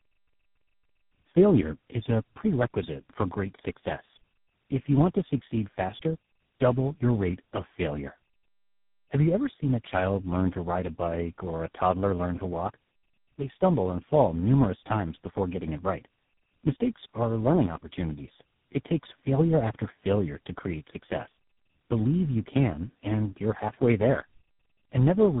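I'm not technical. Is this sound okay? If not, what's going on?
No, it's been squeezed through several phone systems in a row, which is called tandem speech coding. Each one decoded it and re-packed it, stacking roughness on roughness. So the whole clip sounds muffled, warbly and a bit gritty, with nothing above about 3.8 kHz.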